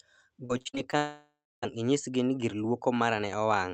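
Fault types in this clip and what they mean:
Repeated packet loss (robotic sound): From 0.45 to 0.95 s the speech turns choppy. Six short gaps, the longest 40 ms, are each patched by stretching the previous sound. About 35% of this stretch is concealed rather than real audio.
Long network dropout: From 0.97 to 1.64 s the speech stops. The last sound carries on as a fading buzz or hiss, then about 300 ms of silence follows. Speech resumes with that part missing. The likely cause is a network dropout on the call path.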